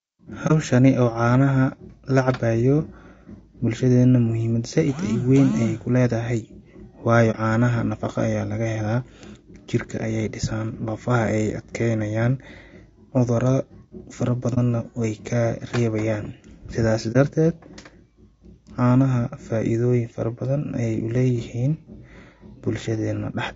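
Throughout the speech, a low-bitrate low-delay codec has coded the signal with a low-delay window over about 500 frequency lines a frame, likely AAC-ELD at a rate around 32 kbps. The damage is plainly audible: the voice turns rough and grainy, noise fills the gaps between harmonics, and the top band sounds thin and synthetic rather than natural.

AAC frame loss with muting occurs four times, each pointing to a single lost frame whose spectrum the decoder zeroed. The first comes at 0.47 to 0.52 s. The second is at 7.31 to 7.36 s, just before "caanaha nafaqa ayaa laga". The third runs from 14.54 to 14.58 s, right before "na weey kaa reebayaan". The last is at 17.12 to 17.16 s, just after "weey kaa reebayaan sidaasi". Because the overlapping windows fade the sound out and back in, each is a brief dip of roughly 40 to 50 ms.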